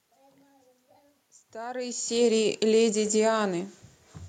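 No technical faults occur anywhere in this speech clip.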